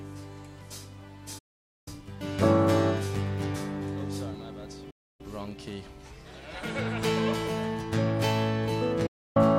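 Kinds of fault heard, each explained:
Digital broadcast dropout: the receiver stopped getting usable frames and muted until clean ones returned, so the sound fades out in about 8 ms and goes fully silent from 1.38 to 1.88 s, 4.90 to 5.21 s and 9.06 to 9.37 s. The holes last 480 ms and 288 ms, consistent with whole 32 ms frames being dropped. Unlike an analogue signal fade, there is no hiss or gradual loss of level, only a clean gap with the missing sound never resent.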